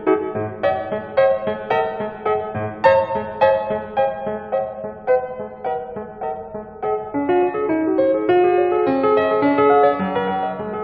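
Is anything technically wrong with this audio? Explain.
Yes. The music plays back at the wrong sample rate throughout the clip. It runs about 1.09 times faster than it should, and it sits about 1.47 semitones sharp, which fits material recorded at 44.1 kHz being clocked out at 48 kHz with no conversion. Because speed and pitch both come from the same clock, they shift together. The playing sounds hurried and bright, and every tone is lifted by the same ratio. On a spectrogram, every harmonic sits about 9% higher than it should, with the spacing between harmonics kept in proportion. The waveform's events arrive compressed in time by the same factor.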